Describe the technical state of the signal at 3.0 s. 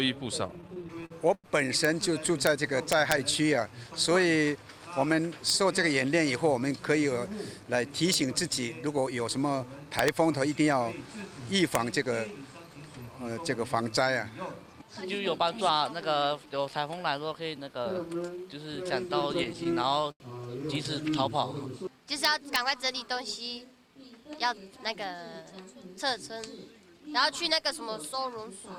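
Integer overflow from 2.92 to 3.12 s: peaks driven about 2 dB past the limit wrap to the opposite sign, giving harsh cracks, sign-flip spikes and broadband vertical streaks.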